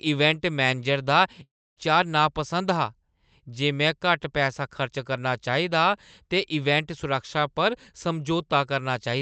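A speech recording carried over a WebRTC call path, where the upper limit near 8 kHz and coding noise fit Opus at about 32 kbps, suffers a long network dropout from 1.43 to 1.79 s, just after "इवेंट मैनेजर दा". The likely cause is a gap in arriving packets. About a third of a second of audio never came through. The receiver stretches the last sound into a fading buzz, then leaves near-silence until speech resumes with that stretch missing.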